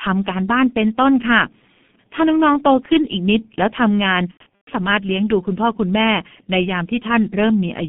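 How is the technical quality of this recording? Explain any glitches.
Quality is poor throughout, with one dropout. The whole clip passes through the G.723.1 codec at 6.3 kbit/s. Band is limited to 150 Hz to 3.4 kHz. Speech sounds muffled and hoarse, with smeared consonants.

From 4.31 to 4.70 s, VoIP packet loss is concealed by the speech codec. About 270 ms is missing across 360 ms, with the longest gap 120 ms. The decoder extends its last frame, so speech turns buzzy or noisy, fades, then recovers weakly.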